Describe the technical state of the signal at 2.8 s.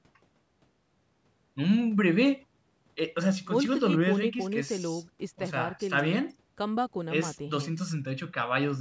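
At 2.8 s the speech comes through intact, with no dropout, distortion or other fault; the call microphone processing it passes through is working as normal, with nothing above 8 kHz.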